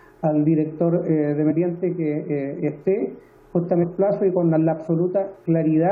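Two short blips break into the audio, at 1.50–1.52 s and again at 3.82–3.84 s. Both come from damaged data in a compressed stream: corrupted bytes make the decoder misread those frames and lose sync until it finds the next valid frame header.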